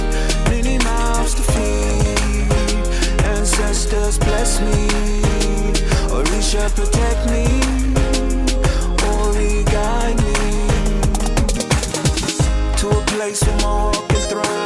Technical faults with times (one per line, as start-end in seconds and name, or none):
none